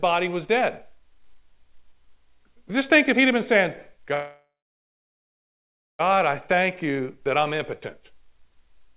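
Speech, carried over a call link whose audio stops at 4 kHz, consistent with a 64 kbps telephone-grade codec. Packets were likely held up in transit until the receiver's jitter buffer ran dry, causing a call audio freeze from 4.14 to 6.01 s, right after "he'd have been saying". The receiver stretches the last sound into a brief fading buzz or hiss, followed by about 1.5 s of silence. Speech then resumes exactly where it stopped, with nothing lost, but everything after runs 1.85 s late.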